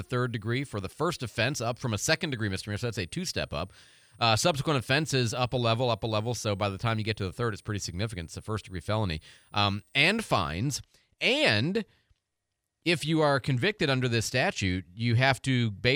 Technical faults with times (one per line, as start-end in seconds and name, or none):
0.00-10.52 switching supply whistle